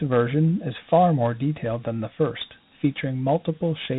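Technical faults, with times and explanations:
Throughout, Dialogic VOX ADPCM: the whole clip has that telephone-system grit, and nothing makes it past about 3.8 kHz, which points to 8 kHz sampling and a 32 kbps stream. The codec only stores a 4-bit code for the difference from a predicted value per sample instead of the actual level, so it keeps undershooting and overshooting the waveform. Those errors ride along with the speech as a rough, grainy hiss, and here the damage is plainly audible.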